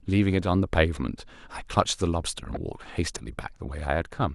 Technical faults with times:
2.54-2.57 damaged data in a compressed stream

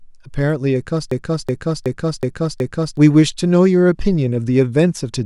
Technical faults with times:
1.11-2.97 system hang loop

